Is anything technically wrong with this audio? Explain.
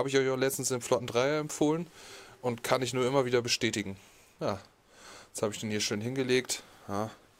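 No, nothing stood out as technically wrong on listening.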